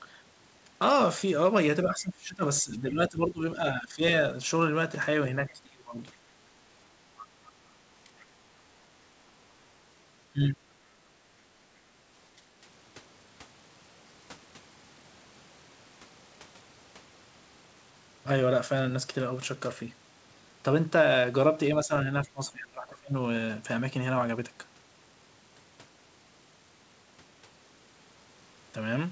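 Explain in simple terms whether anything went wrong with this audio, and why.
The speaker's voice sinks, goes dull or breaks into pieces several times: from 1.86 to 4.01 s, 5.40 to 5.98 s, 8.05 to 8.10 s, 10.33 to 10.53 s, 21.85 to 21.92 s and 22.24 to 23.15 s. The longest gaps are the first and last. This is speech suppressed in double talk. The likely cause is both people on the call speaking at once, so the echo canceller couldn't tell the speaker from the other person's voice coming out of the loudspeaker, and it turned the speaker down too.

Twice, a faint second voice slips in for a split second, from 7.17 to 7.23 s and from 8.20 to 8.24 s. The second time it is barely audible. This is the other side's voice leaking through. The speaker's device was likely playing the other person over a loudspeaker, and the echo canceller didn't clean all of that sound out of the microphone, so brief scraps reached the recording.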